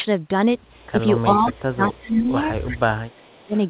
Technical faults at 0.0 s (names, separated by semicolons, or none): none